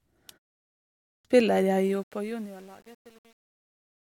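A short speech clip with two problems. At 0.94 s, after a silent gap of about 0.64 s, the next phrase comes in abruptly with its opening missing. That's a clipped start after a pause: the output device had gone to sleep during the silence and swallowed about 307 ms while it woke, so the sound resumes at 1.25 s. From 1.78 s to the end, the fade-out turns gritty as the level drops, with truncation distortion that's worst from 2.1 s onward. The fade stage is rounding to too few bits without dither, which fits an 8-bit path.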